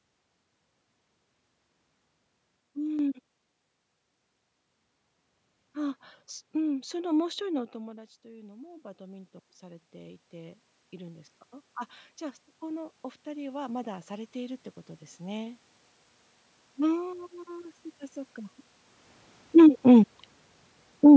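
At 2.6 s the level drops by about 6 dB in one step. This is a sudden gain jump. Speech and background noise fall together, with no fade. The likely cause is a gain setting applied without a ramp. The level recovers at 2.99 s.

From 6.71 s to 11.36 s there is automatic gain rising. Around 7.5 s the talker moves away, and the input falls by about 20 dB. The gain control then raises its gain gradually, by about 10 dB. Speech and room noise swell together.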